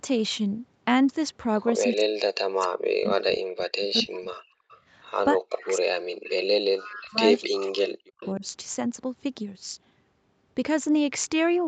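From 1.86 to 4.69 s and again from 5.33 to 8.44 s, speech suppressed in double talk: the speech drops by up to about 40 dB, likely an echo canceller ducking both talkers at once rather than a network dropout. An echo leak appears at 3.95 to 4.02, 4.7 to 4.8, 6.25 to 6.3, 6.84 to 7.1, 7.57 to 7.89 and 8.21 to 8.32 s. These are faint copies trailing by a fixed 256 ms, about 20 to 30 dB down, likely leaked loudspeaker echo rather than room reverb.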